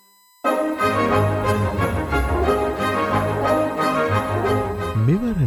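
The USB bus is drawing current in its regular 1 ms frames, and that pulsing is leaking into the audio path through the shared power or ground. The result is USB whine running through the whole sound: a steady tone of fixed pitch at 1 kHz, strongest at that fundamental, sitting roughly 35 dB below the main signal. It is quiet but constant.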